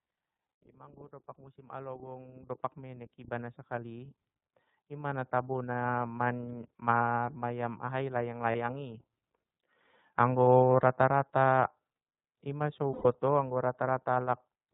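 Throughout, the iLBC codec cuts everything above 4 kHz and leaves the speech slightly rough and synthetic. Unlike smeared codecs, each 30 ms frame stands alone, which fits the 13.33 kbps mode. From 0.63 to 4.2 s the automatic gain rises by about 14 dB, then again from 4.75 to 5.98 s by about 5 dB. Voice and background swell together gradually, not as a sudden jump. After "marmayam ahai layang", from 8.51 to 8.56 s, lost iLBC frames leave a short buzzy held vowel, which fits one 30 ms frame. After "i ma so", from 12.93 to 13.06 s, a longer fading hold fits about 120 ms lost. Each time the speech recovers at once rather than tailing off.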